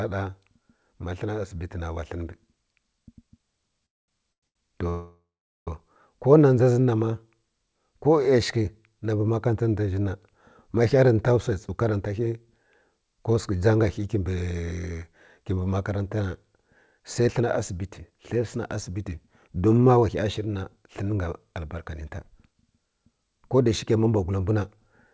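At 3.86 to 4.09 s the sound stops for about 220 ms and then resumes exactly where it left off. This is a call audio freeze, most likely caused by packets held up in transit until the jitter buffer ran empty. Nothing is lost; a gap is inserted instead.

Two short stalls from late packets follow, at 4.33 to 4.43 s (100 ms) and 4.47 to 4.56 s (79 ms). Here the last sound is stretched rather than falling silent, and that holding-on is what separates them from freezes.

A longer freeze runs from 4.89 to 5.68 s, about 0.77 s in total. Roughly 420 ms of it is silence after the held sound fades.

From 10.98 to 11.78 s, just before "karanta ghə", a jitter buffer speed-up plays the audio at about 108% speed. The receiver trims short pitch-period slices, removing under a tenth of a second. The pitch stays the same, so this sounds hurried rather than shifted.

The same speed-up returns at 16.60 to 24.85 s at 108%, removing around 0.7 s across that span. 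The audio passes through a wideband call codec with nothing above 8 kHz, which fits G.722 at 64 kbps.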